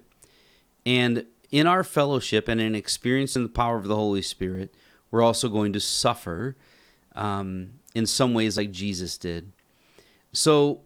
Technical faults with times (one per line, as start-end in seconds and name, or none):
3.36 dropped buffer (overrun)
4.55 dropped buffer (overrun)
6.40 dropped buffer (overrun)
8.58 dropped buffer (overrun)